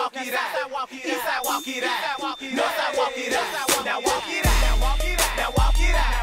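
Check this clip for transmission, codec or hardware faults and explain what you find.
One fault is present: a feedback whistle from 1.28 s to the end of the clip. The likely cause is a loudspeaker-to-microphone loop sitting just short of full feedback, so a single 3.6 kHz tone keeps ringing around 20 dB beneath the audio. It is heard as a thin, fixed-pitch whistle that slowly swells and fades.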